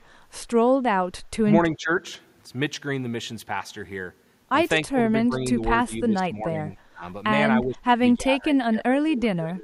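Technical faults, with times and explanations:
1.75–1.91 s, 4.87–5.61 s, 5.85–7.03 s and 7.63 s to the end, speech suppressed in double talk: the speech ducks by around 15 dB in the first three stretches and closer to 25 dB in the last, for most of each span. That's likely an echo canceller hearing the far end talk over this talker, failing to tell the near-end speech from loudspeaker echo, and clamping both down.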